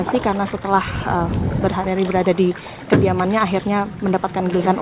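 No technical faults are audible anywhere in the audio.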